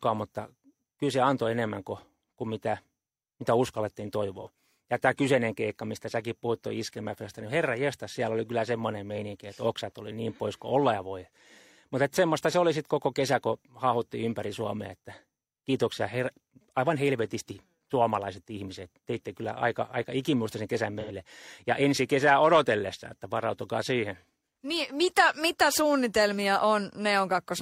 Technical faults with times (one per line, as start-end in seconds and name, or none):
4.41-4.47 AAC frame loss with concealment
21.00-21.12 AAC frame loss with concealment